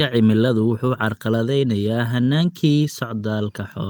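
No technical faults can be heard anywhere in it.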